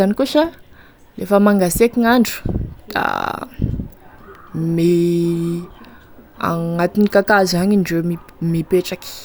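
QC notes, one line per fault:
Nothing to flag on this one: the speech runs without a single technical fault worth noting.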